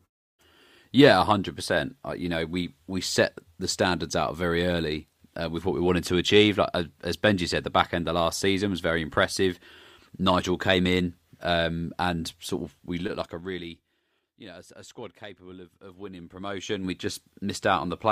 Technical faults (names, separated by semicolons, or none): zipper noise